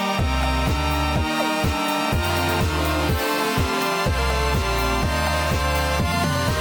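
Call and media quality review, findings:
No technical faults heard in the music clip; signal level, continuity and timing hold steady throughout.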